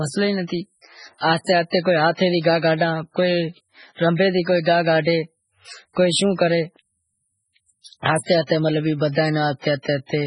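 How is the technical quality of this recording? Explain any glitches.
The technical quality is poor: the speech carries heavy codec damage throughout, plus one pre-echo.

MP3 compression, throughout: the sound is watery and swirly, and nothing survives above 10.5 kHz. This likely comes from MP3 encoding at a very low bitrate, consistent with about 16 kbps. The encoder zeroes weak frequency lines that flicker between frames and cuts all treble at a fixed point.

Pre-echo, at 8.04 s: a short hiss spreads about 18 ms ahead of a sharp attack, which sounds smeared. The transform codec spread quantisation noise across the whole block, so noise meant for the loud attack also filled the quiet moment before it.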